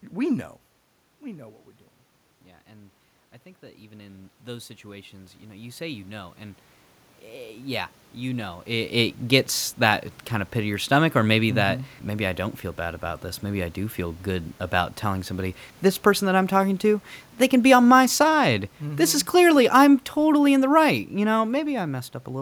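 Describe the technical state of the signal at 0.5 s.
At around half a second the speech signal is intact, with the level shift there coming from the talker moving relative to the microphone against the room noise rather than from any fault in the signal path.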